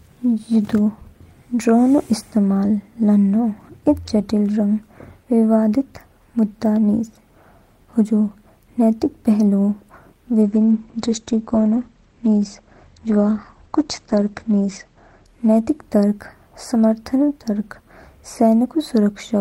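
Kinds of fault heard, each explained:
Call bitrate drop: between 10.42 s and 16.07 s the speech turns coarse and muffled as the encoder is starved of bits, consistent with a fall from roughly 32 kbps to about 11 kbps after the call's bandwidth estimate dropped. Audio bandwidth shrinks from 20 kHz to 8 kHz, dulling sibilance and removing air, and the roughest stretch lasts about 4.6 s before quality recovers toward the end of that span.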